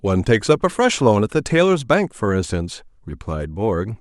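It's a speech recording with sample clock jitter running the whole way through. The converter's clock wobbles by something like a microsecond and a half, so each sample lands a touch early or late, and the error scales with how fast the waveform is moving. You get a faint hiss and grit riding on the louder, brighter parts of the speech, roughly 40 dB below the signal, that drops away completely in the gaps.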